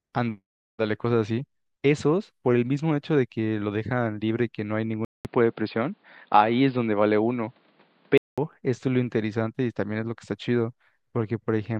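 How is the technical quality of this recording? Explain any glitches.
There's one real glitch here. From 5.05 to 8.38 s the speech goes dull and boxy, with nothing above 5 kHz, a 200 ms gap at the switch, a level jump and a faint new hiss. That's likely an input switched to a poorer device, then back.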